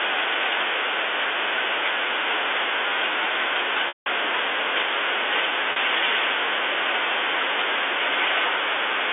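Packet loss with pitch repetition occurs at 3.88 to 4.06 s and at 5.72 to 5.76 s. Missing stretches of the telephone-band speech are filled by repeating the last pitch period. The 40 ms gap sounds like a briefly held buzz. The 180 ms gap fades toward silence before the speech cross-fades back.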